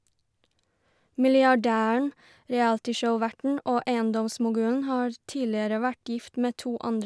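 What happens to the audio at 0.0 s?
At 0.0 s the audio is intact, with no fault at that moment.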